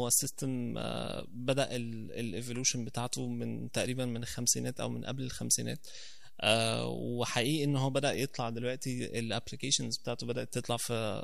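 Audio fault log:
Throughout, DC offset: the waveform sits about -44 dBFS off zero, inaudible as such but wasting headroom and leaving steady energy at 0 Hz.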